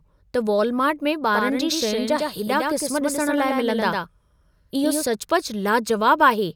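From 1.35 s to 5.05 s the speech is shadowed by a second copy of itself, landing about a tenth of a second late and a few decibels quieter. It is full-band and dry, with no decay or room colour, and it switches on and off abruptly at those two points. This is a doubled audio track, likely caused by the same signal being picked up again through a slower path and mixed back in.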